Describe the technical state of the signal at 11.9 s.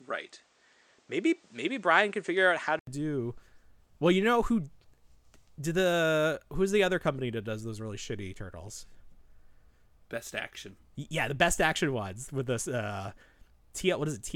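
The speech signal at 11.9 s is intact, with no audible technical fault at that moment.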